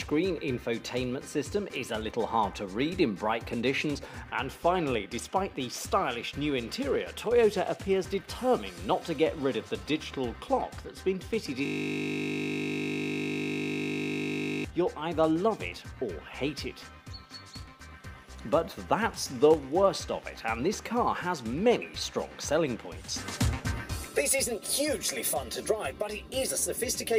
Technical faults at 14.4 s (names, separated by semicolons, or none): system hang loop